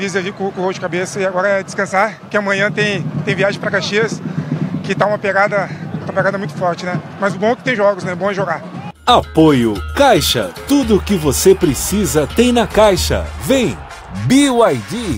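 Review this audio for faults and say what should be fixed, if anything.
Hard clipping occurs from 1.97 to 2.37 s, where the signal overruns the ceiling of a stage by only about 1 dB. The tops of the loudest peaks are sliced flat, and those squared-off edges spray harmonics high into the spectrum, heard as a brief crackle. On a waveform the peaks sit pinned against a flat line; a spectrogram shows faint broadband streaks reaching upward in that span. Lowering gain before that stage by a few decibels would prevent it.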